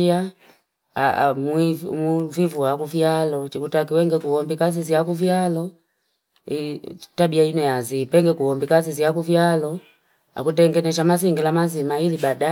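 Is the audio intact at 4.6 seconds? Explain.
Yes, at 4.6 seconds the speech runs on cleanly with no dropout, click, distortion or other technical fault.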